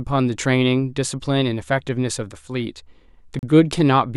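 At 3.39 s the speech drops out to complete silence. The gap lasts about 37 ms, ending at 3.43 s, and the sound then returns. The break is abrupt at both edges, with no fade. This is a Bluetooth stall. The likely cause is radio interference delaying packets on the wireless link. The headphones' buffer emptied before fresh audio arrived. Playback had nothing to play, so it paused briefly until delivery caught up.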